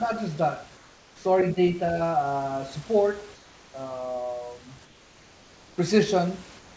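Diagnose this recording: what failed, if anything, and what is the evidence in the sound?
Comfort noise in place of the background, a call-processing fault. After "just that" at 0.77–1.25 s, and at 3.35–3.74 s, 4.85–5.78 s and 6.59 s to the end, room noise turns flat and featureless, about 2 to 4 dB quieter, likely from discontinuous transmission. A gate would leave silence instead.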